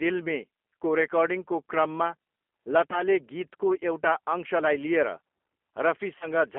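Throughout, the speech carries G.729 codec damage: band-limited to 250 Hz–3.4 kHz and plainly rough and synthetic, as the 8 kbit/s coder rebuilds it from filter, pitch and sparse pulses.

At 2.91–3.02 s and 6.18–6.28 s, VoIP packet loss concealed by the speech codec stretches the sound into a fading buzzy tone or coloured noise, followed by weak recovery. The gaps point to roughly 10 ms and 30 ms lost.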